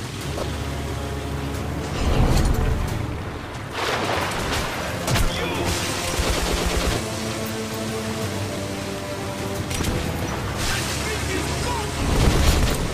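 A corrupt frame decoded at 0.37 to 0.43 s: damaged bits in the compressed stream were decoded as if valid, so misread gains and codes put energy at the wrong frequencies. It sounds like a brief chirp or burst of noise peaking near -15 dBFS, a length that points to about two frames.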